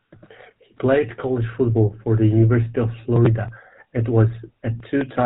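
From start to end, the speech carries GSM full-rate codec damage, consistent with the 13 kbps full-rate mode. Pulse-driven vocal-tract modelling leaves a plainly buzzy, gravelly roughness. A spectrogram shows nothing above 4 kHz and coarse, smeared harmonics.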